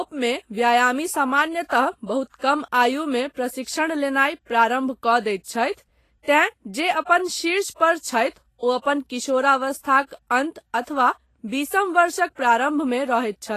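The speech has most likely passed through low-quality Vorbis compression, which runs from start to finish and fits a low bitrate of around 30 kbps. At that rate the encoder pulls its cut-off down and quantises the treble so coarsely that fine high-frequency detail is swapped for noise of similar energy. The damage is plainly audible. The upper range sounds hissy and grainy, tones take on a roughened edge, and consonant attacks lose their sharpness and blur.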